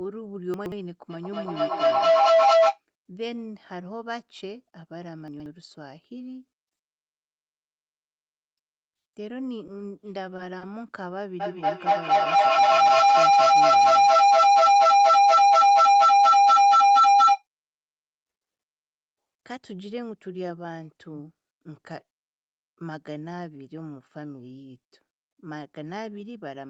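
The clip is speech with three kinds of fault. Chunks out of order occur at 0.54–0.72 s and again at 5.28–5.46 s. In each, a 60 ms piece of audio plays two chunks late, after material that should follow it. Nothing is lost, but the order is scrambled. The result is a brief jumbled moment with hard joins. A feedback howl builds from 1.1 to 2.82 s and again from 11.4 to 17.47 s. Two devices in the same room are on the call. Sound loops from loudspeaker to microphone and gains level on each pass. The repeats narrow to a tone near 700 Hz. The loop repeats roughly every fifth of a second, and the tone peaks about 17 dB above the speech. The howl runs until the loop is broken. Short stalls from late packets come at 10.36–10.41 s and 10.58–10.64 s. Each time, a packet missed its slot and the jitter buffer ran dry. The receiver held the last sound for 20 ms, then 30 ms, until the packet arrived. 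Nothing is missing, but the sound drags briefly. Throughout, the audio stops at 8 kHz, from the call codec's bandwidth.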